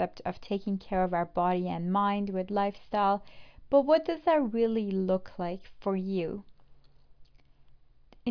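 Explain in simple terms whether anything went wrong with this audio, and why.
Nothing went wrong here.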